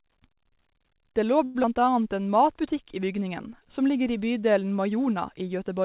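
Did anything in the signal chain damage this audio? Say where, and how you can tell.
Yes. From 1.44 to 1.57 s the speech stalls into a fading buzz for about 0.11 s, then resumes exactly where it stopped with nothing lost. This is a call audio freeze, likely a jitter-buffer underrun from delayed packets. A spectrogram shows smeared, decaying harmonics bridging the gap.

At 1.63 to 1.66 s, short concealed packet loss drops about 40 ms of speech, and the playout delay shrinks by roughly 30 ms. The network never delivered those packets, so the decoder briefly continued the last sound and then blended back. The waveform shows a short splice and the spectrogram a brief smear, all within the G.711 call band, which stops at 4 kHz.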